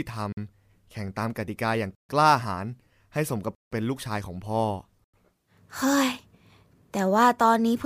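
A block of digital silence cuts the speech at 0.33–0.37 s, 1.95–2.09 s, 3.55–3.72 s and 5.04–5.14 s. These are holes of 46 to 166 ms, most likely where the output buffer went unfilled, the first fitting a 2048-sample block. Unlike a faded dropout, each cuts out and back in with no fade.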